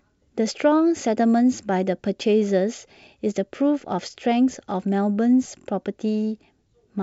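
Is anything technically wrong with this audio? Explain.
No, nothing's wrong here: it's speech carried over G.722 wideband telephone coding, which sounds the way it should, with the lighter upper band reaching toward 7 kHz.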